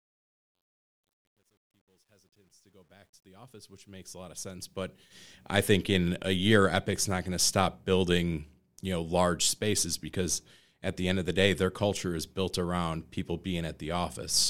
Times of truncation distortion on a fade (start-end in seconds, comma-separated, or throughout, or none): 0.00-5.48